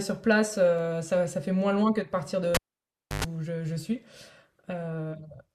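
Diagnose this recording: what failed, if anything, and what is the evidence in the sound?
A single sharp click at 0.79 s points to dropped samples. A fraction of a millisecond is missing, likely a driver or buffer glitch.

The cable was pulled and plugged in, an analogue wiring fault. A pop at 2.55 s, 648 ms of near silence with a 109 ms burst of 50 Hz buzz. Another pop at 3.24 s.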